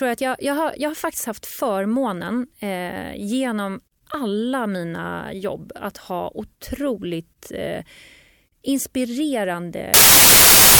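Speech recorded with 32-bit samples appears to have been read back as packed 24-bit samples from 9.94 s to the end at 10.79 s, a wrong sample width. Many values read in that stretch combine bytes from neighbouring original samples, so only some values keep the real signal's top bits. The last 0.85 s becomes loud noise with the speech buried underneath, and it plays at 0.75 times its proper speed, which drags the speech and lowers its pitch.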